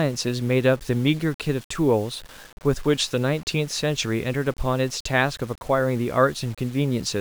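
A speech clip with grainy, signal-following distortion throughout, most audible as grit on quieter syllables and a sputtering breakup as they fade toward silence. This is likely low bit depth without dither, with rounding to around 7 bits, leaving an error floor roughly 25 dB below the speech.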